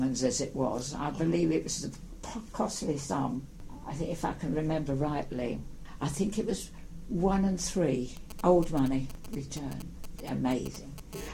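From 8.17 to 11.15 s, GSM signalling bursts break in at roughly 15 dB below the sound: a nearby 2G phone's intermittent radio bursts are rectified into galloping dit-dit-dit ticks, unlike a continuous hum. At 11.16 s a steady GSM phone buzz takes over until 11.29 s, a hard, raspy 217 Hz tone rich in harmonics, about 16 dB below the sound, from the phone now transmitting in bursts 217 times a second as in a call.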